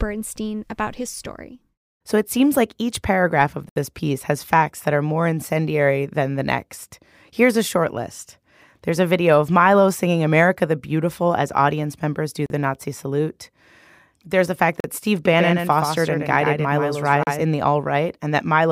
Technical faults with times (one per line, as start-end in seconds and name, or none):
3.69-3.76 Bluetooth stall
12.46-12.50 Bluetooth stall
14.80-14.84 Bluetooth stall
15.25-17.43 doubled audio track
17.23-17.27 Bluetooth stall